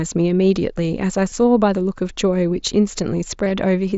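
At 1.3 s and again from 3.45 to 3.51 s, concealed Bluetooth headset packet loss fills dropped frames with a copied stretch of recent waveform: a brief buzzy hold, a repeating-period patch in the waveform and a flat, held spectrogram slice over the mSBC band.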